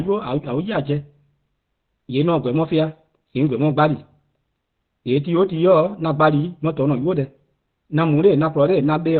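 Throughout, the speech sounds muffled and hoarse, and a spectrogram shows nothing above 4.5 kHz, a flat ceiling. This heavy damage is likely Opus compression in its narrowband SILK speech mode, fitting a bitrate near 12 kbps, which trades bandwidth for bits.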